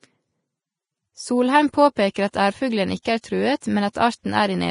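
Vorbis compression runs through the whole speech recording, the likely cause of its heavy coding damage. Nothing is present above 10.5 kHz. Below that ceiling, the treble detail has been quantised so coarsely that it turns into hiss and grain of similar energy, and tones sound roughened. That degree of damage fits a low bitrate, somewhere around 28 kbps.

Pre-echo appears at 2.14 s, 3.02 to 3.05 s, 3.21 to 3.24 s, 3.60 s and 3.93 to 3.95 s, lasting between 15 and 29 ms each time. At each of these points a sharp attack falls late in a transform block. The codec spreads that block's quantisation noise evenly, so noise sized for the loud onset also fills the quiet moment before it. The result is a brief hiss leading into each attack and a softened, smeared onset.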